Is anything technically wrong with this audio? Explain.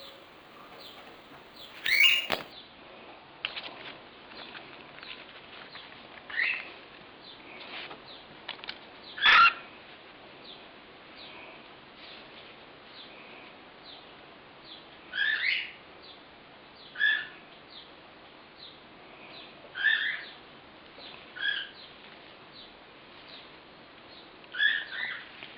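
Yes. From 0.00 to 2.52 s there is imaging from sample-and-hold upsampling. The audio was raised from a 24 kHz rate to 44.1 kHz by holding each sample for extra output samples, with no smoothing filter. Mirror copies of the original band therefore fold up above it, the first filling 12 to 24 kHz at about 16 dB below the signal. They come across as a metallic fizz that rises and falls with the sound.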